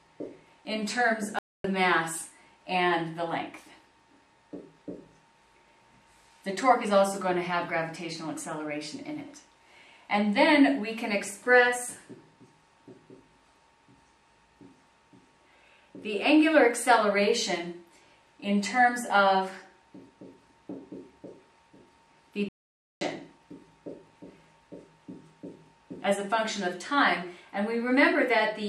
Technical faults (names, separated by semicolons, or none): playback stall